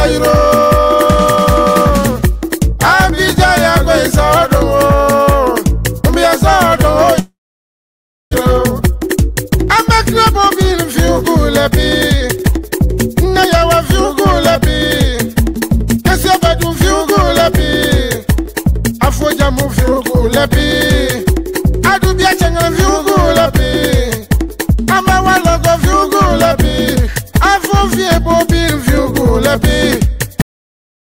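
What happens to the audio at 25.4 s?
Nothing goes wrong at 25.4 s; the audio plays through that moment intact, with no audible fault.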